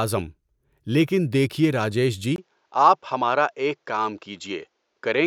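Speech, and right after "دیکھئے راجیش" at 2.36 s there's a 20 ms gap, then everything above 7.6 kHz vanishes with a faint new hiss, likely the input switched to a poorer device.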